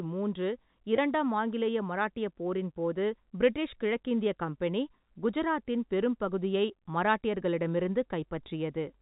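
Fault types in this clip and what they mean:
Packet loss with pitch repetition: a brief buzzy hold at 0.96 s, lasting about 20 ms, just before "ஆங்கிலேய மராட்டிய போரின் போது", where the sound briefly sticks on one repeated cycle instead of moving on. A single lost packet's worth of audio went missing, and the receiver filled the hole by replaying the most recent pitch period. The gap is short enough that the held fragment never fades to silence before normal speech resumes.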